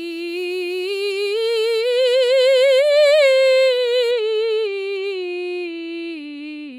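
A music clip with de-emphasis applied wrongly from 4.11 s to the end. A treble cut meant to reverse pre-emphasis has been applied where none existed, or applied a second time. The response slopes smoothly downward, about 11 dB lower at 10 kHz than at 1 kHz. The music turns dull and muffled.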